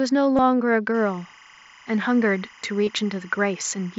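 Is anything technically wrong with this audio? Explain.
Yes. Two faults can be heard in this speech clip.

At 0.36 to 0.39 s and again at 2.85 to 2.87 s, short buzzy, tonal patches replace the speech, with a slight warble as it returns. This is concealed Bluetooth headset packet loss. In the first patch, about 45 ms of packets are missing across a 60 ms span, the longest gap being 22.5 ms. The second patch is a single 22.5 ms gap. The phone fills each gap by repeating the closest-matching recent slice of waveform.

From 0.94 s to the end, a steady chirping warble sits roughly 30 dB under the speech, flipping between pitches near 1 kHz and 2 kHz. This is timecode bleed: a square-wave linear timecode signal at 25 frames per second leaking in from an adjacent track or cable.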